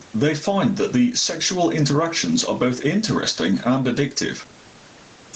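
Gain pumping runs through the whole speech clip, likely from input gain set far too high with a fast limiter clamping down on each loud sound. The gain swings roughly 10 dB, which squashes the dynamics.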